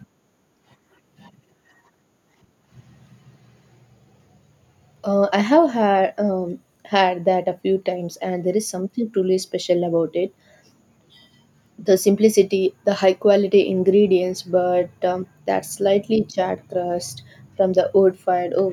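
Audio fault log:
Nothing stood out on listening to this speech recording.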